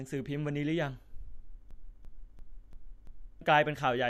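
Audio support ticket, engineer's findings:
System hang loop, 1.71–3.41 s: one 341 ms chunk repeats five times, stuttering at 2.9 Hz. Driver froze, ring buffer kept replaying; fits a 16384-sample buffer. About 1.5 s lost.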